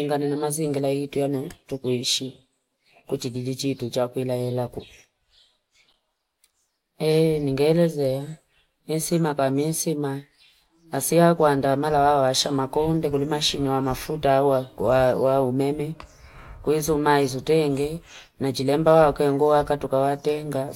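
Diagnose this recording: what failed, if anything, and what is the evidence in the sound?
Nothing failed: no fault is audible anywhere in the recording.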